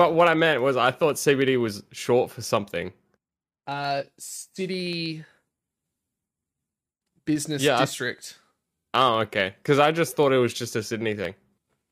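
From 0.08 s to 11.83 s, periodic USB or driver dropouts skip a sliver of audio, well under a millisecond, every 64 ms, about two hundred times in all. Regular ticks sound only under speech. A spectrogram shows evenly spaced thin vertical broadband lines; the waveform shows small steps.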